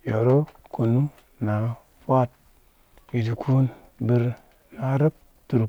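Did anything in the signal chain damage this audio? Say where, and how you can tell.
No, nothing along the chain has left a mark on this speech recording that a careful listen can pick up, so there's no stage to point to.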